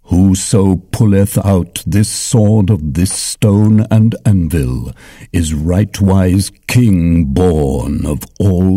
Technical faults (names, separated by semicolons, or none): hard clipping